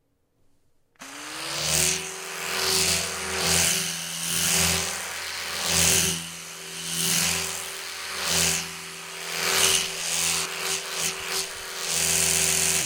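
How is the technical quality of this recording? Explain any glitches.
The recording has one glitch: a doubled audio track from 2.88 s to 10.46 s. A second full-band copy of the sound runs about a tenth of a second behind at roughly equal loudness, likely from an out-of-step duplicate capture or edit. Unlike an echo or reverb, it has no decay or room colour, and it switches on and off abruptly.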